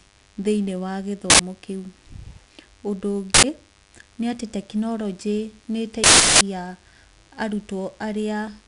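From the first moment to the end, a thin, steady buzz sits under the speech, a low hum at 100 Hz with a dense stack of harmonics, about 30 dB below the speech. This is DECT cordless phone buzz: a nearby DECT handset or base transmits a radio burst every 10 ms, and the audio circuitry rectifies those bursts into an audible pulse train at 100 Hz.

Also present throughout is 4-bit ADPCM compression, and its damage is plainly audible. Every louder syllable carries a gritty hiss that rises and falls with the speech, and sharp onsets sound roughened where the adaptive step size lags behind sudden jumps in level. Nothing reaches above 10.6 kHz, so the top end is dulled. That ceiling points to a reduced sample rate, and together with the grit it fits a 4-bit stream of roughly 88 kbps.

At 1.30 s, just after "thĩinĩ wa", a short, loud blast of digital noise cuts in for about 93 ms, ending at 1.39 s. 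Another 93 ms burst follows from 3.34 to 3.44 s. A much longer one runs from 6.04 to 6.41 s, about 372 ms. These are uninitialised buffers: each block was sent to playback before any audio was written into it, so stale memory contents were heard as samples. The short bursts fit a 4096-sample block and the long one a 16384-sample block.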